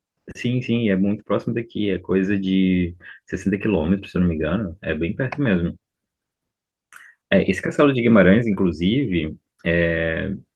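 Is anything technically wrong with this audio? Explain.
No, nothing technically wrong stands out here; this speech recording comes through without any faults to point to.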